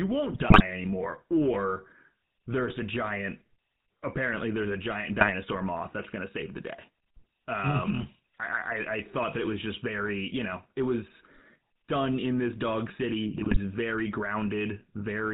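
A buzzy, gravelly roughness runs through the whole recording, with the speech sounding boxed in and nothing left above 4 kHz. That is the sound of the GSM full-rate codec at 13 kbps, which rebuilds the voice from a vocal-tract model driven by coarsely spaced pulses instead of the real waveform. The lost excitation detail and the hard band limit leave the codec damage plainly audible throughout.

From 0.34 to 0.62 s the speech breaks into squawks and gargling, and brief pops and spectral smears follow at 5.19 to 5.32 s, 9.72 to 9.77 s and 13.34 to 13.6 s. These are GSM bit errors: corrupted bits reached the decoder, so wrong filter, pitch or gain values distorted the spectrum or level for the affected frames. The first and last bursts are longest. The short one near 9.7 s has the heaviest error rate, about 3.2%.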